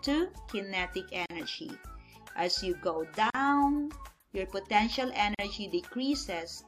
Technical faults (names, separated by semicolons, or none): gap at a join of encoded pieces